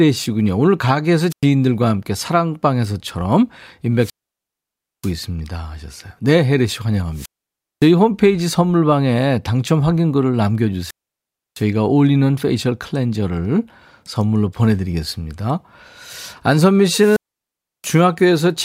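Speech drops out five times: at 1.30, 3.97, 7.13, 10.80 and 16.94 s. Each is a wireless microphone squelch dropout. The radio signal fades, hiss rises, then the receiver mutes. The silent holes last 0.10, 0.94, 0.56, 0.66 and 0.68 s.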